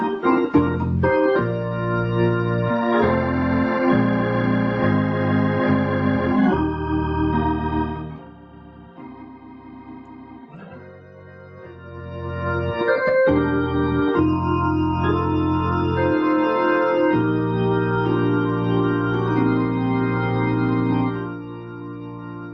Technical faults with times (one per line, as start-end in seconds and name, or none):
none